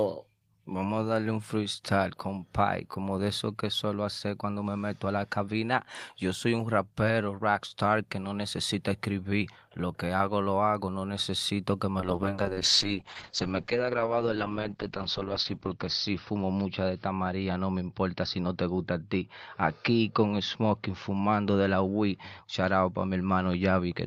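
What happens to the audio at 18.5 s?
At 18.5 s you're in the middle of a call bitrate drop that starts at 12.0 s, right after "hago no necesito que", and runs to the end. The bandwidth estimate fell, so the encoder went from 32 kbps down to 8 kbps and narrowed its bandwidth from 20 kHz to 6 kHz. The speech comes out muffled and rough and watery, with the top end gone, and it bottoms out for about 3.6 s.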